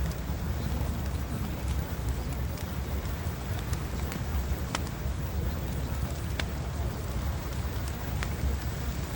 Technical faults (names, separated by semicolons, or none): block size mismatch (padded)